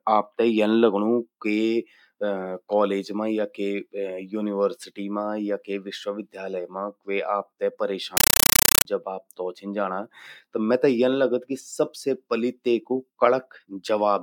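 A compressed stream played as audio: an undecoded AC-3 stream is treated as samples from 8.17 to 8.85 s, after "विश्वविद्यालय मां क्वो आपतै", giving loud chattering static of 8 ms bursts, 31 times a second.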